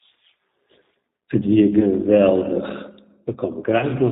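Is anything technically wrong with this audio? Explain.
Yes. The speech carries two technical faults. Throughout, it has the sound of the G.729 codec: a slightly rough, synthetic voicing, with the timbre of a low-rate coder that rebuilds speech from a vocal-tract filter, a pitch predictor and a few pulses per frame, which fits an 8 kbit/s G.729A stream. The damage is plainly audible. On a spectrogram, all energy stops abruptly at 4 kHz, and the harmonics look smeared and slightly granular.

At about 1.79 to 1.88 s and again at 3.79 to 3.86 s, VoIP packet loss concealed by the speech codec appears. The decoder lost audio, which fits one 10 ms frame at the first point and two frames at the second. It filled the gaps by repeating its last pitch and filter with falling gain, so the voice turns briefly thin and stretched before recovering. On a waveform, each spot shows a short, decaying stretch. 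On a spectrogram, it shows a frozen, fading pattern.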